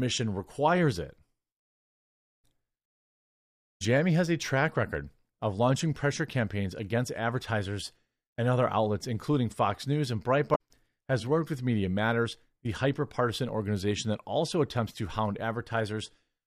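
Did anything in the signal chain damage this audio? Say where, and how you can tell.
Yes. Damaged data in a compressed stream, at the codec or storage stage. A short stretch of the encoded stream was corrupted, so the decoder misread those frames, lost sync and had to hunt for the next valid frame header before recovering. This is heard as a brief garbled blip from about 10.52 to 10.61 s, roughly 90 ms, just before "has worked with". The speech then resumes once the decoder locks back on.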